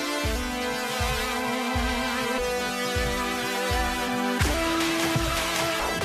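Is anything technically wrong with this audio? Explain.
Yes. From 2.37 to 2.39 s, the music has damaged data in a compressed stream. Corrupt bytes throw the decoder out of sync, giving a brief glitch.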